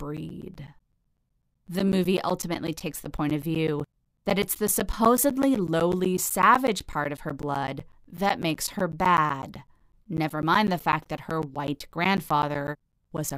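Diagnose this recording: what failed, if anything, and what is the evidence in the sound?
The fault sits at the driver or buffer stage: periodic USB or driver dropouts run through the speech from 0.17 s to 13.30 s. Every 0.125 s, eight times a second, about 10 ms of audio is replaced by silence, giving around a hundred regular ticks. A recurring background task is stalling the USB bus or audio driver. Network packet loss would space its gaps irregularly, and these are strictly periodic.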